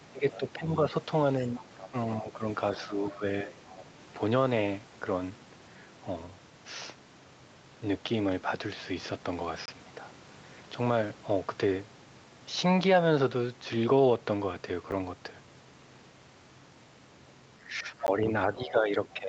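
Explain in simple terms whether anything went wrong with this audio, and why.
The talker's voice dips and thins, as though someone briefly turned it down, from 0.0 to 0.78 s, 1.57 to 2.43 s, 2.88 to 3.5 s, and again from 17.65 s to the end. This is speech suppressed in double talk, likely because both sides spoke at once and the echo canceller lowered everything to be safe.

A faint second voice, much quieter than the talker, slips in at 1.4 to 1.89 s, 3.69 to 3.85 s and 18.62 to 18.71 s. This is the other side's voice leaking through, likely because the echo canceller failed to fully remove the loudspeaker sound the microphone picked up.

There are sudden tiny gaps: a short hole at 9.66 to 9.68 s, and ticks at 14.91 s and 18.07 s. Each is a block of digital silence, most likely where the program missed filling its audio buffer in time and pure silence went out instead.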